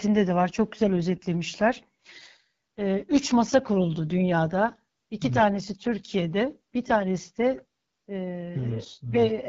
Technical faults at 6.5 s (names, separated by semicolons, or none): AMR wideband (HD Voice) codec